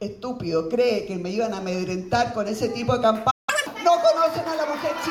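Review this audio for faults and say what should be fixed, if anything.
A playback stall silences the sound from 3.30 to 3.49 s, for about 171 ms. The player likely ran dry or its thread was blocked. A larger playback buffer with higher thread priority would prevent this.

A catch-up at higher speed follows from 3.49 to 3.67 s. The backlog plays at 2.0 times speed, with pitch raised roughly ten semitones. Time-stretching without pitch change, or simply dropping the backlog, would prevent this.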